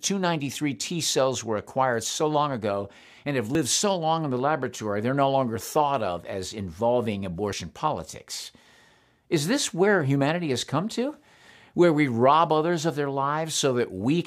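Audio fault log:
3.55 s and 7.53 s, audio missing between chunks. The sound skips briefly after "long ago and have" and after "thought of as involving". About 20 ms vanishes each time, joined with no gap. The spacing of about 4 s points to a likely chunked recorder dropping audio at each boundary.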